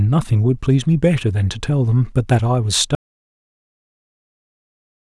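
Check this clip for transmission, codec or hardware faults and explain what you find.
There is one fault, an audio dropout to silence. At 2.95 s the speech cuts off mid-flow into silence, with no room tone, and stays silent to the end. The input was likely lost through a disconnection or mute while the recorder kept writing silence.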